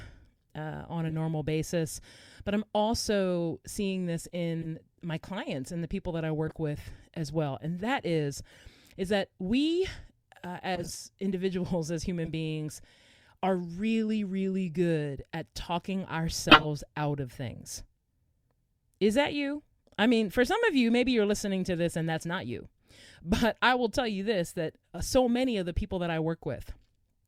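Corrupt frame decoded at 1.08, 4.62, 6.47, 8.51, 10.75, 12.25 and 16.49 s. Flipped bits left the decoder reading wrong gains and codes, so energy lands at wrong frequencies. Each is a chirp or noise burst of 40 to 170 ms, and the 16.49 s burst is by far the strongest.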